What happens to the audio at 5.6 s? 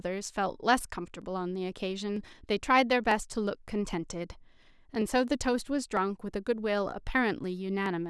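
Clock drift buffer slips cover 5.6 s, within a run from 0.27 to 7.86 s. Two devices likely run on separate clocks, around 700 ppm apart, so a small block of samples is dropped or repeated every 0.95 s, heard as a regular click.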